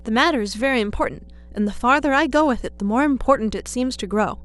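A ground loop or a nearby transformer is letting the 60 Hz power line leak into the signal path, and it does so for the full length of the speech. The result is mains hum: a steady low drone at 60 Hz with a few low harmonics above it. It sits roughly 20 dB below the speech.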